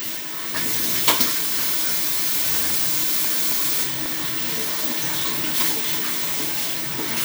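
From 2.70 s to 4.06 s there are CD scratch ticks: six short clicks, the longest only a couple of milliseconds. Each turn of the disc carries a blemish past the pickup, destroying more data than error correction can rebuild, so the player interpolates or mutes the damaged samples.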